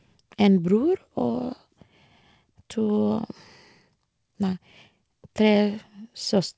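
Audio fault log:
1.32 to 1.36 s, short concealed packet loss: roughly 20 ms of the speech arrived too late for the decoder, and the receiver covered the gap by extending the preceding sound, pitched if voiced or as shaped noise if not, for about 17 ms before crossfading back into the real signal. That stitched-in stretch is heard as a brief smear or wobble. It sits on a band that stops at 8 kHz, which fits a G.722 wideband call path.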